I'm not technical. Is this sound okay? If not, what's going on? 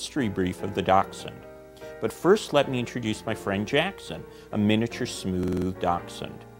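No. At 5.43 to 5.67 s there's a system hang loop. The computer briefly froze, so one 46 ms scrap repeated five times, a rapid stutter.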